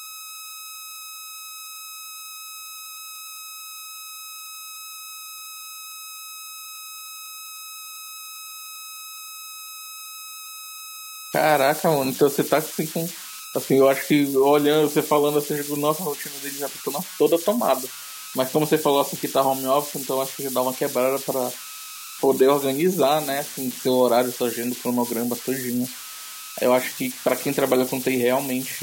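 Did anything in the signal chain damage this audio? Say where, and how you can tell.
Yes. The converter stage is at fault: it shows converter idle tones for the whole clip. The delta-sigma modulator is running without dither, so when the speech level drops it settles into repeating bit patterns that form a tone. Here that tone sits around 1.5 kHz, heard in the pauses and as a grainy noise under the quieter speech. The error is about 14 dB below the signal.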